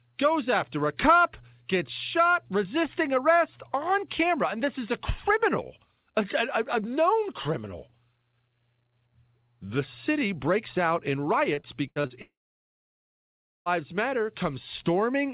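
A speech recording carried over a call link whose band stops at 4 kHz, consistent with G.711 A-law coding at 64 kbps. From 11.54 to 12.13 s, repeated packet loss (robotic sound) sets in: several short gaps, the longest about 83 ms, are patched by stretching the preceding sound, so about a third of that span turns choppy with fragments missing. From 12.22 to 13.69 s the audio stops arriving, likely a long network dropout. The last sound is extended briefly as a fading buzz or hiss, then roughly 1.3 s of silence follows before the speech resumes with the lost portion gone.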